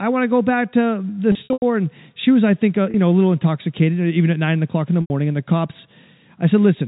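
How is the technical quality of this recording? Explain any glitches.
The recording has packet loss with pitch repetition in three places. It is speech through G.711 telephone coding, so nothing above 4 kHz passes.

Packet loss with pitch repetition:
At 1.32 to 1.62 s, after "go back to the", about 180 ms goes missing, scattered over 300 ms in runs of up to 90 ms. At 2.91 to 2.94 s, between "was I think uh" and "know a little intoxicated", 30 ms drops. At 5.01 to 5.10 s, after "nine o'clock in the", 90 ms is lost.

The losses fit six, one and three lost packets of about 30 ms each. To fill each gap, the receiver repeats the last pitch period and fades it out over about 50 ms. The 30 ms loss sounds like a slightly held, buzzy note. The 90 ms runs outlast the fade, so they sink into silence before the speech cross-fades back in.

Unlike a plain dropout, which cuts abruptly to silence, each gap here starts with a smooth, tonal repetition of the preceding sound.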